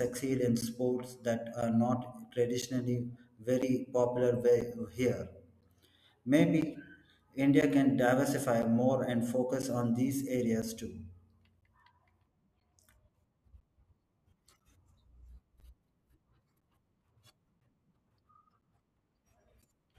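From 0.61 s to 19.63 s, periodic USB or driver dropouts strike once per second, each blanking roughly 10 ms of speech with silence. They click audibly during voiced passages. The waveform shows evenly spaced flat gaps, and the spectrogram shows thin vertical broadband lines.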